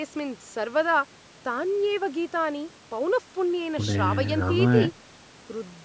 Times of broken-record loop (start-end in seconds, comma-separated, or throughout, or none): none